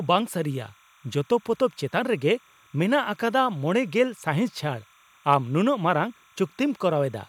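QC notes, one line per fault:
Throughout, timecode bleed: linear timecode leaks in from a neighbouring track or cable, adding a faint chirping warble near 1 and 2 kHz, roughly 35 dB under the speech.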